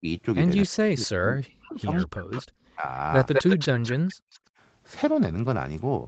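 A speech recording from a call, band-limited to 8 kHz, which fits a wideband Opus path. It has three faults. The first is speech suppressed in double talk. The voice is pushed down at 0.0 to 0.07 s by about 25 dB, then for most of 0.65 to 2.85 s and again from 3.64 to 4.2 s by as much as about 40 dB. It thins and breaks up. The likely cause is both sides talking at once. The echo canceller could not tell this talker from loudspeaker echo, so it turned everything down. The second is echo leak. A delayed copy of the voice, lagging by 207 ms, comes back at 1.97 to 2.06 s, 2.31 to 2.42 s, 3.33 to 3.93 s and 4.3 to 4.39 s. Its level varies widely. It sits about 25 dB and about 15 dB below the speech in the first two, roughly as loud as the speech in the long one, and about 30 dB down in the last. This is likely far-end audio from a loudspeaker reaching a microphone, with the canceller failing to remove it. 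The third is background gated by the echo canceller. From 4.48 to 4.58 s the room sound drops by about 38 dB for a brief moment, then returns. The canceller clamped the microphone while the loudspeaker played and released it straight after.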